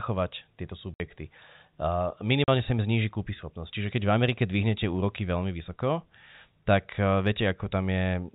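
Right around 0.94 s the speech just drops out for about 60 ms, and again at 2.44 s for 40 ms, right before "sa im". That's packet loss filled with silence: packets never arrived and the receiver played dead air in their place. Both gaps are multiples of 20 ms, which points to 20 ms packets, and each gap has hard edges. It's all over the narrow, telephone-band G.711 sound.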